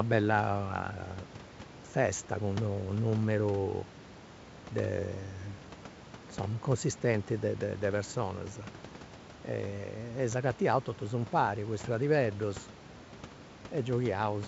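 No technical faults are audible.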